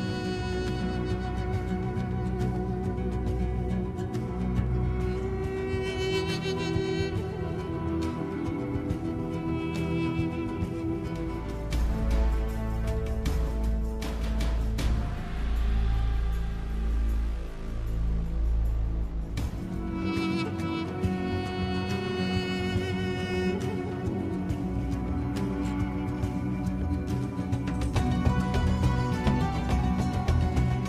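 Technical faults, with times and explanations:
No technical faults can be heard in this recording.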